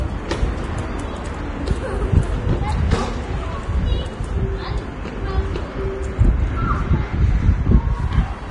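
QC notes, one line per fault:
Throughout: Vorbis compression. Nothing is heard above 10.6 kHz, so the top octave is gone and the sound seems dulled. The remaining treble is hissy and grainy. Tones sound rough, and sharp attacks are smeared. The likely cause is a low-quality Vorbis encode, with damage heavy enough to fit a bitrate near 30 kbps. The encoder kept only a smooth outline of the upper spectrum and quantised the detail on top so coarsely that it turned into noise.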